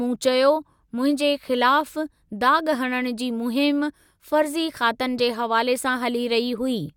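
Nothing in this speech recording trips up the ear, since no dropouts, clicks, glitches or other technical faults turn up anywhere in it.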